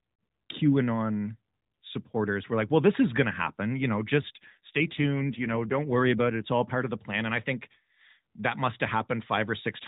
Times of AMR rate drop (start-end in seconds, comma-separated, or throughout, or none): 4.22-6.49